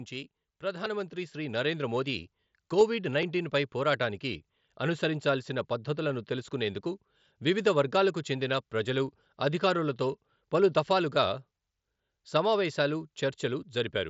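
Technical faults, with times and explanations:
0.6 to 2.32 s, automatic gain rising: the level climbs by about 7 dB over nearly two seconds, and the background lifts along with the speech. The gain control judged the input too quiet and ramped its gain up gradually rather than in one step.
2.80 s, 6.10 s and 12.75 s, concealed Bluetooth headset packet loss: each is a single lost packet of about 7.5 ms between headset and phone. The receiver filled the gap by repeating a matching stretch of recent waveform, so each dropout passes as a barely noticeable blip.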